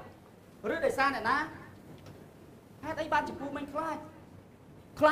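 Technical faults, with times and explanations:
Nothing stood out on listening; no technical problem could be heard anywhere in the audio.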